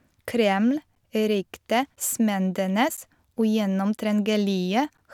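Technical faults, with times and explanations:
0.95–4.98 s, periodic USB or driver dropouts: A short tick breaks the speech about once every second. Each one is a gap of silence lasting around 10 ms. Something is stalling the USB bus or the audio driver at a fixed interval. The audio due in that moment never arrives, so the output drops to silence and then jumps back. Those abrupt edges make the click. The even one-second spacing points to a recurring background task.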